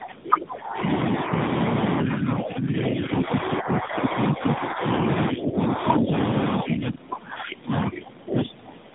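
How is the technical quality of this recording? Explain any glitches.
The recording is rough and band-limited throughout, and the level repeatedly sags in several stretches.

Tandem speech coding runs through the whole clip. The speech sounds gritty, muffled and warbly, with nothing above 3.8 kHz. This points to a call that passed through three low-bitrate speech codecs in a row, such as AMR-NB, GSM full rate and AMR-NB again, with A-law links between them. Each coder re-encodes the previous one's already degraded output, so the artefacts stack up.

Speech suppressed in double talk affects five stretches: 0.0 to 0.87 s, 1.23 to 1.38 s, 2.03 to 4.83 s, 5.33 to 5.6 s, and 6.56 s to the end. In these the speech dips and thins, by about 10 dB in the milder spots and up to about 25 dB at the start and the end. The likely cause is an echo canceller. With both parties talking at once, it could not tell this talker apart from loudspeaker echo, so it turned the speech down.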